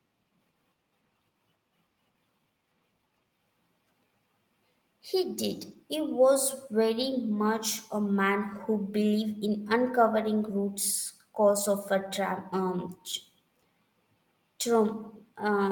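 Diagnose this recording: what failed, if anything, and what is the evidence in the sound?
Network stage: lost packets rebuilt from error correction at 5.67–5.77, 7.01–7.11, 8.53, 9.37, 10.57 and 12.01–12.07 s. There are no gaps, but these stretches sound briefly rougher and noisier because they are low-bitrate redundant copies.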